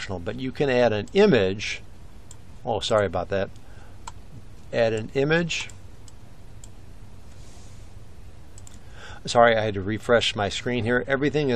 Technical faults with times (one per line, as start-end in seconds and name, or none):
none